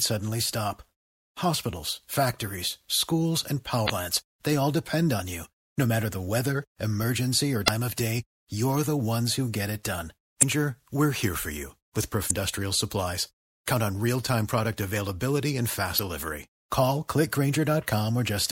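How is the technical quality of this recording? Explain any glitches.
The speech is marred by five short glitches caused by damaged data in a compressed stream. They occur at 3.86–3.90 s, 7.64–7.69 s, 10.39–10.43 s, 12.27–12.31 s and 15.95–15.99 s, each lasting about 44 ms. At each point, corrupted bytes in the encoded stream cause the decoder to misread or discard the affected frame and lose sync until it finds the next valid frame header. The result is a brief chirp, squawk, click or short hole that interrupts the audio.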